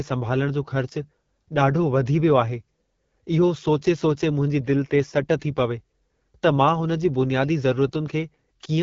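AMR wideband (HD Voice) codec damage runs through the whole speech clip. The speech has a rough, raspy quality, which points to one of the codec's two lowest rates, around 8.85 kbit/s, and nothing sounds above 7 kHz, where the codec stops.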